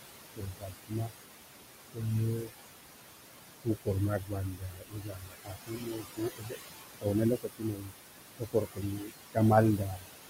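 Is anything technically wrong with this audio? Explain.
Yes. Noise suppressor artifacts run through the whole clip. The suppressor lowers whatever it judges to be steady noise by about 20 dB, frame by frame. The room noise sits only about 8 dB below the speech, so it sinks in pauses and rises under talking.

Speech cut by the noise suppressor occurs at 0.34–1.13, 1.94–2.03, 2.37–2.52, 3.64–3.88, 4.2–6.56, 6.94–7.95, 8.37–9.37 and 9.77–10.07 s. The suppressor mistook parts of the speech for noise and pulled them down by about 14 to 22 dB. Those parts sound swallowed or faint, most extensively from 4.2 to 6.56 s.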